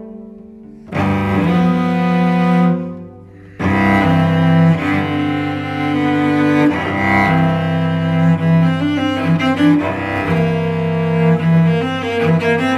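Nothing here stands out as a technical problem; the audio runs along without any fault to point to.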